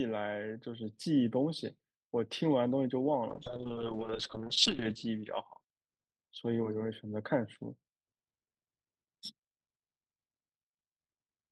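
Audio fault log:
3.31–6.65 s, call bitrate drop: The speech turns rough, watery and muffled, and clears again by 6.65 s. The encoder was starved of bits after the bandwidth estimate fell. The roughness fits a drop from around 32 kbps to around 7 kbps. With so few bits, detail is coded coarsely. The top end is cut too, from 20 kHz down to 8 kHz. The worst stretch lasts about 1.03 s before the rate climbs back.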